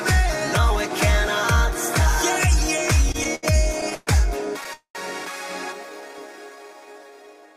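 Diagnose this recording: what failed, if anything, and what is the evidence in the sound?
Between 3.09 and 4.09 s you get repeated stalls, a proper stutter. The sound hangs eight times in that second, the longest hold being 120 ms, and about 255 ms in total is filled in, roughly a quarter of the span. Nothing actually drops out; it just drags. That's a network and jitter-buffer problem: packets kept turning up late or slower than playout, the buffer ran dry over and over, and the receiver stretched the last sound each time until data arrived.

At 4.73 s there's a call audio freeze lasting to 4.97 s. The last sound smears on for about 217 ms, and the final 100 ms of that has faded to silence before the audio resumes exactly where it left off, so nothing is missing but everything after is pushed 217 ms later. The likely cause is a network hold-up that emptied the jitter buffer, with the receiver covering the wait by extending and fading the last bit it had.

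From 5.89 s to about 7.54 s there's a jitter buffer slow-down. Playback runs at around 83% speed with the pitch unchanged, so sounds come out drawn out, and about 291 ms gets added over that stretch. The buffer was rebuilding its reserve, repeating single pitch periods and bits of pauses over and over to buy time.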